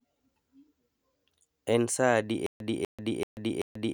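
Speech with a stutter with silent gaps from 2.46 s to the end: a 246 ms fragment repeats four times, each followed by 138 ms of digital silence, likely from a stalled stream replaying its last buffer.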